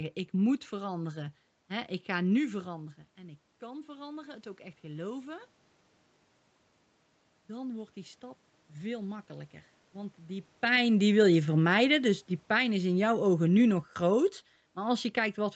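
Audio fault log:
2.63–5.53 s, automatic gain rising: just after "ga nu", the voice has dropped by about 13 dB as the talker moves back, and the gain control slowly adds about 5 dB. The room noise swells with it. On the waveform, the envelope and the noise floor climb together. On the spectrogram, the whole band, including the gaps, darkens gradually.
10.64–14.32 s, automatic gain falling: after the talker's movement near 10.5 s, the control judges the input too loud and eases the gain down by about 5 dB over several seconds. The voice and background sink together. The waveform envelope and noise floor taper steadily, and the spectrogram fades evenly across all frequencies.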